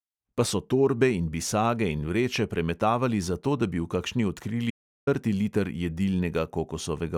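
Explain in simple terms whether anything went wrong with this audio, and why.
Yes, something went wrong: an audio dropout to silence. Around 4.70 s, just after "kakšni odkrili", the recording stops receiving any sound, most likely because the input briefly disconnected or was muted while the recorder kept running and filled the gap with nothing. For about 0.37 s, until 5.07 s, the speech cuts out into total silence, with no background room sound at all, and whatever was said in that moment is lost.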